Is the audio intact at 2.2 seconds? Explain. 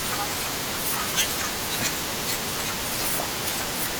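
Yes, at 2.2 seconds the speech is intact, with no audible dropout, click, distortion or other fault at that moment.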